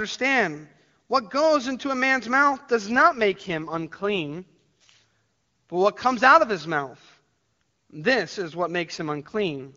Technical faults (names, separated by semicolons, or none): AMR rate drop